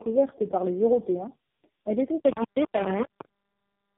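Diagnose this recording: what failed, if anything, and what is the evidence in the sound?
Tandem speech coding runs through the whole clip, a fault at the codec stage. The speech sounds rough, muffled and warbly, with nothing above 3.5 kHz. That combination fits at least three speech codecs in a row, ending in a low-rate AMR-NB coder. At each link border the signal was decoded and coded again. Each coder then modelled artefacts left by the previous one, so the distortions stacked.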